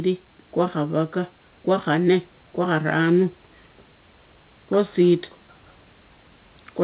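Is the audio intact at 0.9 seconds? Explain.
Yes, the audio is intact at 0.9 seconds, with no fault at that moment.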